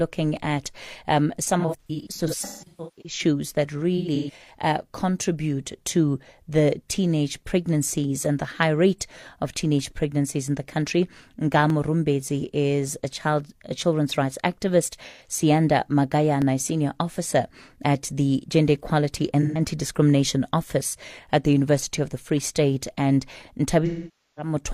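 Speech recording with two kinds of damage. First, three isolated sharp clicks at 0.37 s, 11.70 s and 16.42 s, the last just before "senior officer at the". Each is a single thin tick, most likely dropped samples, where under a millisecond of audio went missing and the waveform jumps straight to a later value. That's far too short to lose any sound, just a discontinuity you hear as a click.

The bigger problem is AAC frame loss with concealment. Right after "at um", from 1.59 to 3.19 s, the audio goes smeared and phasey in patches. About 0.81 s is missing, scattered over roughly 1.45 s, with the longest gaps around 150 ms. Another stretch runs from 3.97 to 4.54 s, just before "uh contribute to", with about 0.3 s missing across half a second. There are shorter 128 ms smudges at 15.07 and 19.42 s. At 23.85 s about 512 ms is lost over 0.7 s. In each spot the decoder is patching over missing frames by reusing the last good spectrum with scrambled phase, which is why it sounds washy rather than silent, and it fades out when the gap runs long.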